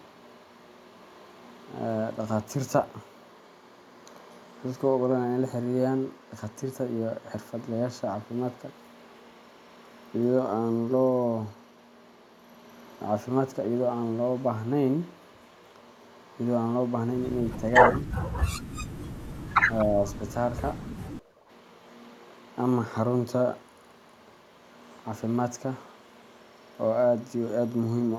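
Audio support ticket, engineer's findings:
Speech suppressed in double talk at 17.93–18.08 s (dip around 10 dB) and 19.86–20.05 s (around 5 dB). Near-end voice itself ducks during overlap, likely the echo canceller mistaking it for loudspeaker echo. Unlike gating, the talker's voice drops, not just room tone.

Background gated by the echo canceller at 18.62–18.74 s (about 15 dB) and 21.18–21.48 s (about 9 dB). AEC suppressor clamps the mic while far-end audio plays. Only the room sound drops out, then recovers on release.

Echo leak at 19.79–19.84 s. A brief delayed copy of the voice arrives 237 ms late, around 15 dB below the speech. Likely the far-end echo canceller on a speakerphone passing residual echo. It adds sound rather than removing it.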